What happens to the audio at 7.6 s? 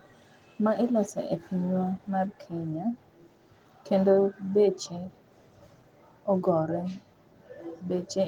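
Nothing goes wrong at 7.6 s; the speech carries on intact there, with only the light, full-band Opus voice coding heard throughout.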